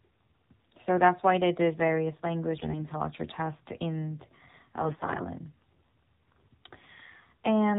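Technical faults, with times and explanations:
Throughout, AMR narrowband mobile codec: nothing gets through above 4 kHz, so the speech sounds boxed-in and phone-like. The buzzy, synthetic edge fits a low AMR-NB mode around 7.4 kbps, where a handful of pulses per subframe drive the vocal-tract model.
2.58–2.86 s and 4.84–5.27 s, AMR bit errors: the first comes right after "why they did various" and clears by "tests in". Pitch and level hold, but the sound turns hoarse and gargly. Flipped low-priority bits, around 7% of them, put the excitation pulses and fine parameters in the wrong places.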